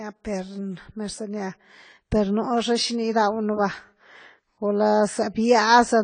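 From start to end the speech sounds dull and smeared, with a warbling, fizzy edge on sibilants, likely from AAC compression at a low bitrate, consistent with roughly 24 kbps. A spectrogram shows a hard ceiling at 10 kHz.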